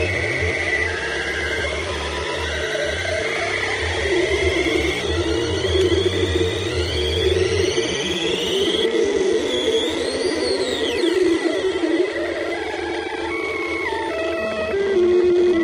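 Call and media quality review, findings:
MP3 compression, throughout: watery, swirling texture, plainly audible. Likely cause: MP3 encoding at about 64 kbps. Weak frequency lines drop in and out between frames, smearing attacks and adding metallic chirps.

Compressed frames skipped at 8.30 s, 12.35 s and 14.10 s: audio jumps ahead by about 150 ms, 100 ms and 150 ms. Each gap is whole 26.1 ms frames lost or rejected by the decoder. Overlapping frames turn each join into a brief smeared blip, not a click.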